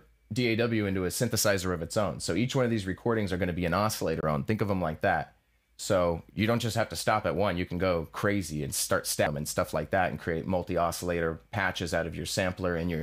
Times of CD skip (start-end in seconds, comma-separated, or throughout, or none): 4.21-4.23, 9.26